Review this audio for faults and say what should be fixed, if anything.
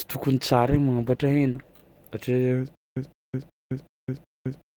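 A call bitrate drop runs from 0.49 s to 1.81 s. The encoder's rate falls from 32 kbps to 15 kbps and stays at the lowest level for about 1.2 s. With so few bits, the speech is coded coarsely and the top end is trimmed. The voice turns rough and muffled until the rate climbs back. To prevent it, smooth the bandwidth estimator and set a higher minimum bitrate for speech.

A stutter with silent gaps starts at 2.75 s and lasts to the end. A 0.16 s fragment of speech repeats every 0.37 s, with about 0.21 s of digital silence after each repeat. The even rhythm points to a playback stall. The likely cause is the player re-sending its last buffered fragment on every retry and then running dry. The speech that belonged in those gaps is lost. To prevent it, use a larger jitter buffer and conceal losses instead of replaying the last fragment.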